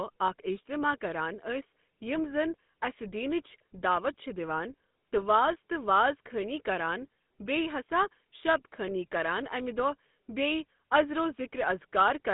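Speech runs through a GSM full-rate codec from start to finish. Nothing below 150 Hz or above 3.6 kHz gets through, so the sound is thin and muffled. The pulse-driven vocal-tract model adds a plainly audible buzzy, gravelly roughness, which fits a 13 kbps rate.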